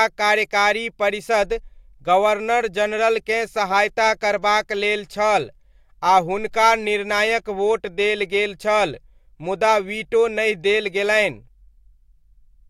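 No faults are audible anywhere in the recording.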